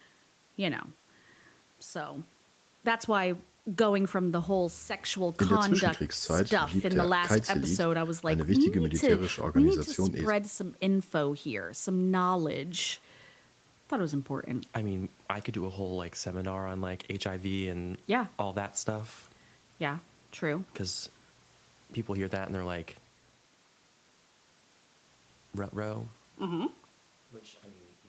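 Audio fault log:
No faults detected.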